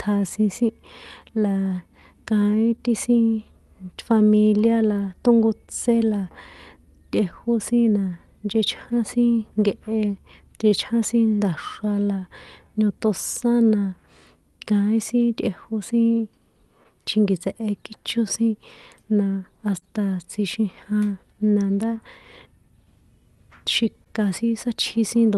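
Clock drift between sender and receiver runs through the whole recording: the sending side's clock is about 2% slower than the receiver's, so the jitter buffer keeps draining and the receiver has to stretch the audio to avoid running dry. This never shows as one obvious event. Instead, the timing of the speech feels faintly unsteady from start to finish, with small hiccups at uneven intervals rather than on a regular beat.

From 0.29 s to 8.57 s there are scattered short gaps, about seven of them, where packets went missing or arrived late. Each hole was patched by extending the preceding sound, adding up to only around 50 ms of filled audio. The longest is roughly 15 ms, so they come across as faint ticks or tiny smears in the speech rather than audible dropouts.

Repeated timing corrections begin at 0.59 s and continue to the end at 25.37 s. To keep pace with the slower sender, the receiver repeatedly inserts short stretches of repeated material, always lengthening the signal, and playback over this span runs at 98% speed. 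The additions total roughly 0.4 s. Each one is small, so the effect is a slightly dragging, uneven tempo with occasional hiccups.

A second cluster of scattered short gaps falls between 15.85 s and 19.84 s, with about five concealed losses. These are somewhat longer, up to roughly 30 ms, and together account for around 70 ms of filled audio. They come across as brief smears where the last sound is held over. Throughout, the Opus call path limits the audio to about 12 kHz of bandwidth.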